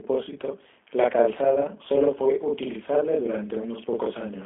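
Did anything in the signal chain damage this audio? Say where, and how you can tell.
Yes. At the driver or buffer stage there is a channel delay (doubling): one channel runs about 43 ms behind the other throughout. When the two channels are summed to mono, the late copy sounds like a tight slap or doubled attack on every syllable. That lag fits a 2048-sample buffer.

At the codec stage, the speech has clearly passed through the G.729 codec at 8 kbit/s. The audio is confined to roughly 250 Hz to 3.5 kHz, with nothing above 3.6 kHz. The codec's pulse-based reconstruction leaves an audible synthetic roughness across the whole clip.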